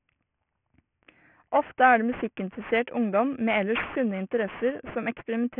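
Speech throughout shows aliasing: the audio was reduced to a 6 kHz rate with no anti-alias filter, so content above the 3 kHz folding point reflects back into the band as unrelated tones, sitting fairly high, about 15 dB below the signal. Sibilants sound gritty and metallic, and the spectrum stays dense right up to 3 kHz.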